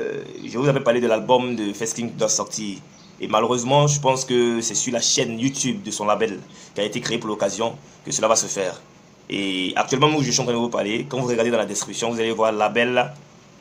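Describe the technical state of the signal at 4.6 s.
At 4.6 s the signal is intact, with no dropout, clipping, glitch or other technical fault audible at that moment.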